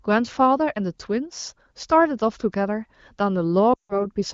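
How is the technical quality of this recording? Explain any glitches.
The recording has one clear glitch near the end: lost AMR speech frames from 3.73 to 4.06 s. The clear wideband HD Voice coding suggests a mid-to-high rate around 16 kbit/s.

At 3.73 s, corrupted frames were concealed by repeating the last pitch and vocal-tract settings with falling gain. The sound drones briefly, then fades almost to silence. The missing audio, about 160 ms, fits a run of roughly eight 20 ms frames. On a spectrogram the harmonics freeze as flat horizontal lines and dim. The waveform envelope tapers to near zero, then returns weakly by 4.06 s.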